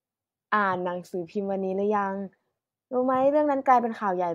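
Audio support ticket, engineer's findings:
No faults found in this speech clip. No dropouts, clicks, distortion or level problems were heard at any point.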